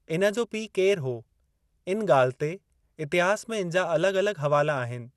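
Throughout, the speech sounds dull and gurgling, likely MP2 compression. A spectrogram shows nothing above 12.2 kHz, with upper sub-bands flickering on and off.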